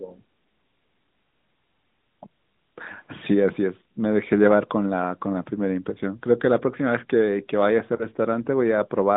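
Lost AMR speech frames at 7.96 to 8.06 s. Radio errors corrupted the speech data, so the AMR narrowband decoder filled the gap by repeating the last good pitch and vocal tract settings at falling gain. The result is a brief dip or warble rather than a dropout, which points to a single lost 20 ms frame. The speech then recovers through the narrow 150 Hz to 3.7 kHz phone band, whose light coding texture fits the 12.2 kbps mode.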